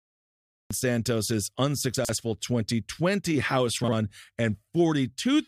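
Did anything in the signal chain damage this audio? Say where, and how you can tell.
Yes. Cut-off start: the file holds digital silence from 0 to 0.71 s, then the speech cuts in mid-sound with no attack. Recording or streaming began late at the capture or storage stage, so the opening of the utterance was never written.

Chunks out of order appear at 1.96 to 2.09 s and 3.84 to 3.93 s. A 43 ms block plays two slots late, then one slot late, producing jumbled syllables and hard joins. This points to network or buffer reordering rather than loss.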